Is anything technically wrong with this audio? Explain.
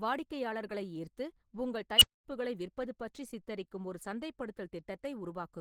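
Yes, two faults are audible.

Across the whole clip there is plainly audible codec damage that sounds like Opus compression. The speech has a muffled, hoarse quality and a grainy roughness rather than the watery swirl of MP3, which fits a low bitrate around 16 kbps in the codec's hybrid mode. The likely cause is that the hybrid encoder handles the lower band with its speech coder and fills the upper bands coarsely, keeping band energy but losing detail.

From 1.97 to 2.25 s there is an unstable filter. A tone around 3 kHz rises to a very loud squeal within about 37 ms, then the sound drops out for about 235 ms until the filter resets. A recursive filter with bad coefficients keeps feeding its own output back, so the tone grows until the numbers overflow. Acoustic feedback would build more gradually and keep howling. This tone surges almost at once and ends in silence.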